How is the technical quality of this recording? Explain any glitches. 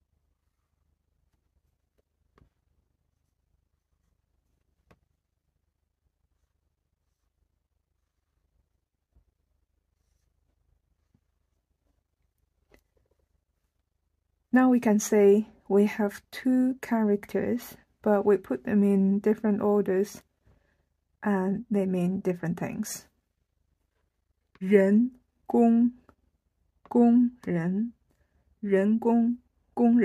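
No glitches or technical faults can be heard anywhere in the recording, and the signal stays steady and intact throughout.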